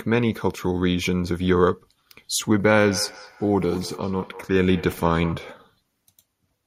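A speech recording where, from 2.8 s to 5.54 s, each phrase comes back as a faint, thin, ringing repeat roughly a fifth of a second behind, peaking at about 16 dB below the speech. This is feedback echo between two devices: two devices in the same room are on the call, one plays back what the other's microphone sends, and that microphone picks it up again. Each echo canceller only removes its own device's playback, so the loop passes through untouched.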